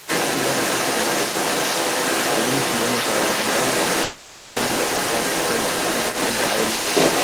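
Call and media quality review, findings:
Brief dip in the talker's level at 0.00–0.09 s, roughly 10 dB down: speech suppressed in double talk, likely the echo canceller ducking near-end audio while the far end was also active.

Other side's voice leaking through for the whole clip, 0.00–7.23 s, at around 5 dB relative to the talker. Likely residual loudspeaker echo that the echo canceller failed to remove from the microphone path.

Call audio freeze at 4.03–4.59 s: sound stalls and is stretched into a fading synthetic tail for 530 ms, then resumes where it stopped. Likely jitter buffer underrun from delayed packets, adding 530 ms of delay.

Skip ahead at 4.96–5.00 s: playback jumps forward almost seamlessly, about 150 ms of audio gone, joined with a 10 ms fill. Audio dropped in transit or by jitter buffer overflow, recovering about 150 ms of the earlier delay.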